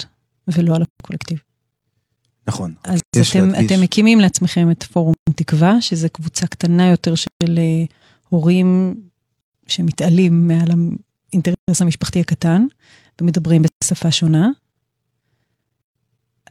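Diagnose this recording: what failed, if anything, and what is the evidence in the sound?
Codec stage: gaps at joins of encoded pieces, about 150 ms at 0.85 s, then 136 ms at 3.0, 5.14, 7.27, 9.41, 11.55, 13.68 and 15.82 s. Each 2 s piece keeps its untrimmed encoder delay and end padding, so the speech stops and resumes where it left off. On a spectrogram these appear as blank vertical bands, and on the waveform as flat silence with slightly smeared edges.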